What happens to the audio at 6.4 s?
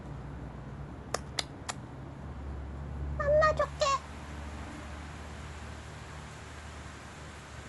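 At 6.4 s the audio is inside a stretch of pre-emphasis left on, running from 3.62 s to the end of the clip. The treble boost applied before transmission was never undone, so highs stand about 11 dB above 1 kHz at 10 kHz, consistent with a J.17 curve. The sound turns thin, bright and hissy.

Underneath, the same moment carries the dull, band-limited character heard across the whole clip. Nothing reaches above 11.4 kHz, and a rough, fluttering noise sits around tonal parts where spectral lines were starved of bits and filled with dither. The likely cause is Dolby Digital compression at a low rate, which fits about 64 kbps.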